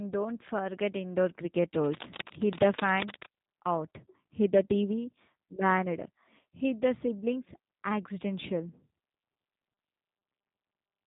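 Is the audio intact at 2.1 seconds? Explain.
No. Cable scratch noise runs from 1.77 to 3.33 s, covering 2.1 s. Dense, uneven bursts of rustling and scratching sit over the speech, only a little quieter than it. The likely cause is a worn cable or connector being moved. Its contact resistance then jumps about rapidly, and those fast changes turn into ragged noise bursts. The scratching stops at 3.33 s.

The G.729 codec also affects this moment, as it does the whole clip. The speech is rebuilt from a vocal tract model, a pitch predictor and a few pulses per short frame. It is not carried as a true waveform. The result sounds rough and slightly synthetic, with plainly audible damage. Nothing above 3.8 kHz survives, so the sound is dull and narrow. This fits an 8 kbit/s stream.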